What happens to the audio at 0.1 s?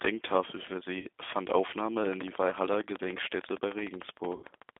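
At 0.1 s the speech already sounds thin and boxy, with a slightly rough, synthetic edge. Nothing reaches above about 3.6 kHz or below about 250 Hz. This is G.729 codec damage, present from start to finish. The coder models each short frame with a vocal tract filter, a pitch predictor and a handful of pulses, and that sparse excitation is what makes the sound rough, at a rate that fits 8 kbit/s.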